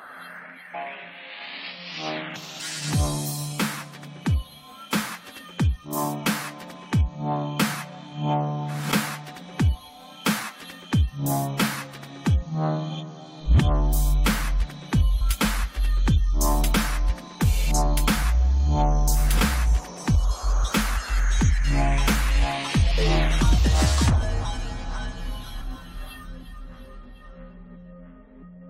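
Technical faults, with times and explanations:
0.73, 2.36, 15.20, 24.44 and 25.60–25.62 s: compressed frames skipped. The audio jumps ahead about 0.1–0.2 s each time, in steps fitting 23.2 ms frames.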